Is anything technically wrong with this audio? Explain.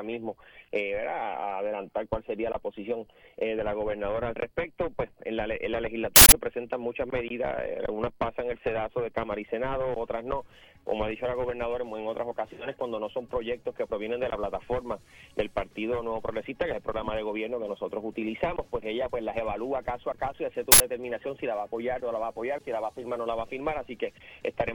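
Yes. Two short, loud bursts of digital noise appear, at 6.16 s for 160 ms and at 20.72 s for 80 ms. This is an uninitialised buffer: a block went to playback before any audio was written into it, so leftover memory contents were played as samples.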